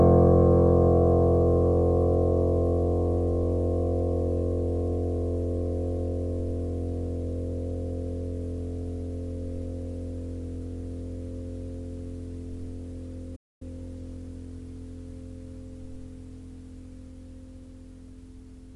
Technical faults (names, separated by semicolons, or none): playback stall